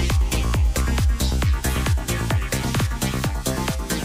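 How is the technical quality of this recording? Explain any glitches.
There is one glitch, a case of repeated frames. At 2.79 to 2.84 s, a 52 ms stretch of sound plays twice in a row. The decoder received the same compressed data a second time and rendered it again. A block that size fits a pair of compressed frames. The result is a brief stutter, a quick doubling of the same fragment. It also lengthens the audio by 52 ms.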